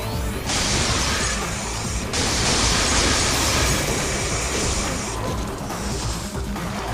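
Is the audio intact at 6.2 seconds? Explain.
Yes, at 6.2 seconds the audio is intact, with no dropout, click, distortion or other fault to be heard.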